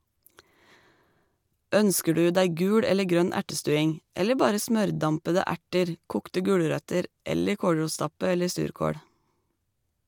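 No technical faults can be heard anywhere in the recording.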